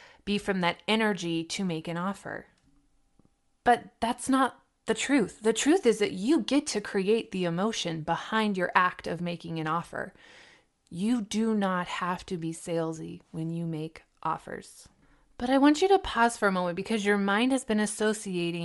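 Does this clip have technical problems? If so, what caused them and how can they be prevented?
Yes. Across the whole speech clip the upper spectrum sounds grainy and breathy, most likely from Bluetooth LC3 compression. The encoder runs short transform frames, consistent with 7.5 ms, and at a bitrate that fits about 48 kbps it discards much of the high band and refills it with synthetic noise. That noise fill is what separates it from a plain low-pass or bandwidth limit, which would sound dull and clean rather than hissy and textured. To prevent it, use a higher LC3 bitrate or a wired or less-compressed recording path.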